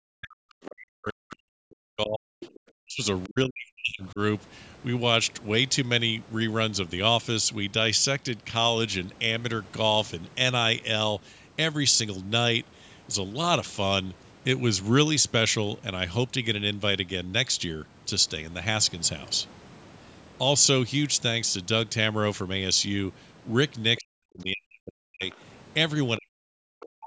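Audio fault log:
0.0–2.48 s, 2.78–3.03 s, 3.27–4.19 s, 23.98–25.23 s and 26.18–27.06 s: speech suppressed in double talk. The talker keeps getting pushed down hard, by about 40 dB at the deepest. That's likely the echo canceller hearing both ends talking at once, failing to tell the local talker apart from the loudspeaker return, and clamping down on everything.
2.41–2.6 s, 3.23–3.28 s and 25.31–25.35 s: other side's voice leaking through. Short scraps of a second voice sit under the talker. The first one is only about 15 dB below the speech, and the later two are fainter, around 25 and 30 dB down. Likely cause is residual echo: the far end plays out of the loudspeaker, and the canceller doesn't scrub all of it from the mic feed.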